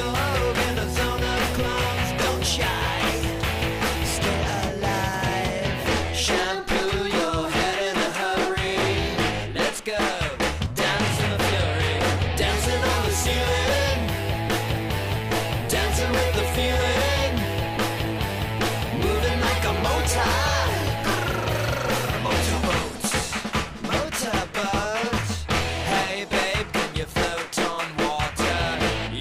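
At 3.62, 10.66 and 23.84 s the audio jumps ahead by a sliver, about 20 ms, then twice that at 25.18 s. No gap, just a splice. Likely a dropped buffer (overrun), where samples were overwritten before being read.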